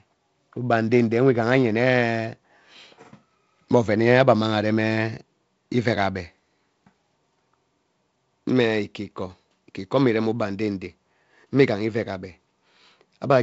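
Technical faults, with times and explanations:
No technical faults heard.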